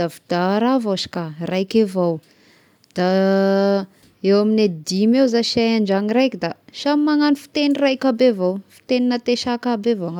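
No technical faults are audible.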